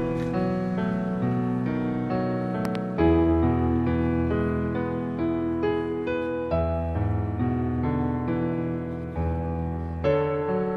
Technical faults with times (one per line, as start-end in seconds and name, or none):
2.65-2.77 loud pop